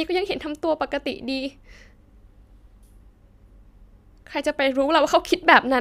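Speech recording; no technical faults can be heard.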